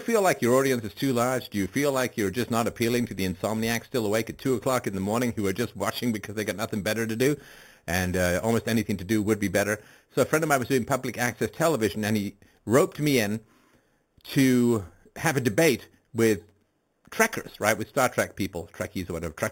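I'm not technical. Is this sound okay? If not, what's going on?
No. The speech has a bright, metallic fizz all the way through. This is imaging from sample-and-hold upsampling. Each sample was simply repeated, with no smoothing, so mirror copies of the voice sit between 4 kHz and 8 kHz. That fits a low-quality 8 kHz original.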